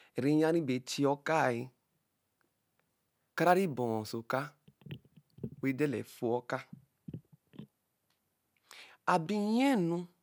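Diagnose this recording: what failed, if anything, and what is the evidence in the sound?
From 1.59 s to 5.88 s the speech picks up a gritty, inharmonic fizz that rides on the louder and brighter sounds, sitting only roughly 25 dB below the speech. This is crude rate conversion at the sample-format conversion stage. Samples were repeated, nearest-neighbour style, with no filtering, which fits a 32 kHz to 48 kHz step. The uneven repetition pattern creates shifted, inharmonic copies of the speech.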